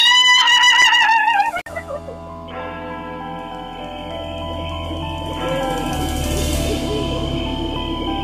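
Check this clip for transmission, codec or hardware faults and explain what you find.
One hardware fault: an intermittent contact at 1.58–1.68 s, where a loose connection opens for about 51 ms, dropping the sound out with crackle at both edges.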